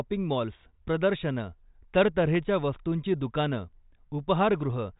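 No technical faults are audible.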